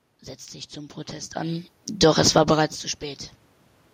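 From 1.86 to 2.44 s the automatic gain falls by about 4 dB, turning the level down. Voice and room noise sink together, which separates it from a talker leaning back, where the background would stay put.

Overlapping it, from 2.36 to 2.84 s, the automatic gain rises by about 6 dB after the input drops by about 19 dB as the talker moves around 2.5 s. Speech and room noise swell together over half a second, unlike a talker approaching, which lifts only the voice.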